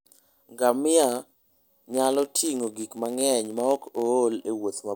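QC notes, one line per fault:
0.99–4.08 s, block size mismatch (padded): a steady buzz at 91.5 Hz sits over the speech, and the pace is only marginally slowed, to 0.996 of normal. One stage is handing over blocks slightly shorter than the next stage expects, and the shortfall in each block is filled with silence. Those tiny gaps recur at the block rate, producing the buzz, and the added silence stretches the timing very slightly.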